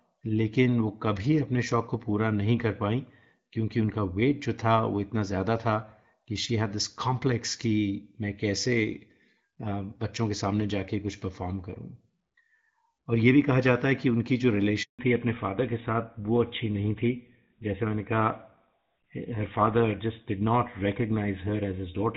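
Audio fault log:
14.83–14.99 s, handover gap: the speech fades out within a few tens of milliseconds and stays silent for 160 ms. Speech frames stopped arriving while the call switched networks, so nothing spoken during the switch survives, and the sound resumes only when the new link starts.
14.99 s to end, fallback to narrowband: right after the gap, everything above 4 kHz disappears and the speech turns duller and rougher. Before this point the AMR wideband (HD Voice) codec carried a fuller band with only light coding damage, consistent with about 12.65 kbit/s. The new, narrower sound fits a switch to GSM full-rate coding at around 13 kbit/s.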